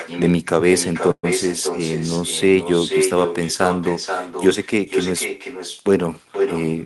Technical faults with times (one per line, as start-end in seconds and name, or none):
0.00-6.86 echo with no canceller
1.11-1.25 call audio freeze